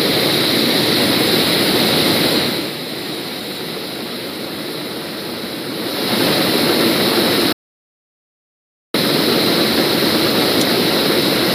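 At 7.53 s the sounds cut abruptly to silence. This is a rebuffering stall. The player used up its downloaded audio and had to wait for more data. The gap lasts until 8.94 s, adding about 1.42 s to the clip. When playback returns, it picks up exactly where it stopped. Nothing is skipped or repeated.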